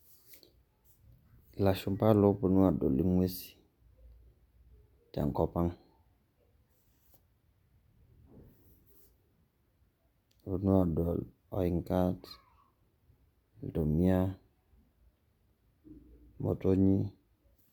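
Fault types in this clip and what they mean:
No technical faults can be heard anywhere in this speech recording. Nothing in the audio points to a problem with how it was captured, processed or delivered.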